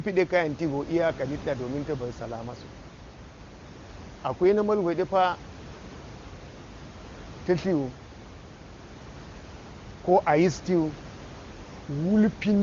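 No technical faults can be heard in the recording. Room noise sits about 18 dB below the speech, and the AMR wideband (HD Voice) coding sounds clear, which fits its top rate of around 23.85 kbit/s.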